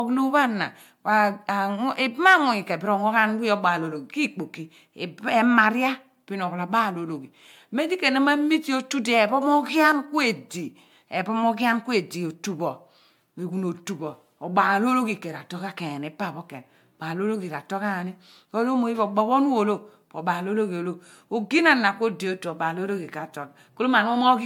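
Throughout, the speech has the swirly, hollow smear and blurred attacks of generation loss, likely MP3 re-encoded about seven times at something like 96 kbit/s.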